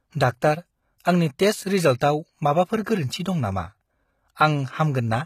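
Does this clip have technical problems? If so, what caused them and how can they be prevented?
Yes. The whole clip has a gritty, metallic top end with nothing above 14.9 kHz, the sort of fake-bright treble you get when high frequencies are rebuilt from copied lower bands. That's most likely HE-AAC compression, and the damage fits a low bitrate around 20 kbps. To prevent it, encode at a higher bitrate or use plain AAC or Opus so the treble is actually coded.

There's also a short pre-echo at 2.00 s, right after "डाक्टार आंनि टेस्ट". A hiss of about 15 ms creeps in just ahead of a sharp attack, because the codec spread noise meant for the loud onset back across the quiet moment before it. A higher bitrate or an encoder with better transient handling, using shorter blocks, would keep that noise tucked behind the attack.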